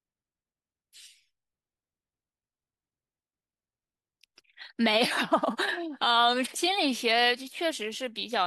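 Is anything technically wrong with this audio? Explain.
No, nothing technically wrong can be heard in this speech recording.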